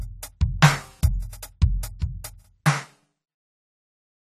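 A short piece of music carries AAC compression damage from start to finish. It is plainly audible. Nothing sounds above 14 kHz, so the top end is dull. Sustained tones warble and smear. Bright, hissy sounds turn fizzy. The likely cause is an AAC-LC encode at a low bitrate. The depth of the damage fits roughly 32 kbps. At that rate the encoder starves the spectrum of bits. It lowers its cut-off and leaves gaps between bands.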